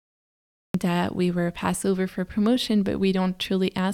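A speech recording that opens on dead digital silence, then jumps straight into the talker mid-utterance at 0.74 s, landing on "that we were passed" with no breath, rise or fade-in beforehand. This is a cut-off start: capture or streaming began late, so the first portion of the sentence was never recorded, and the waveform steps abruptly from silence into an already sounding syllable rather than building up from a natural onset.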